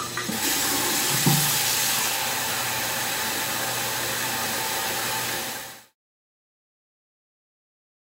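Nothing here counts as a fault; the only change is a gentle, deliberate-sounding fade-out that starts around 5 s and reaches silence by 5.96 s, with no click or hard edge.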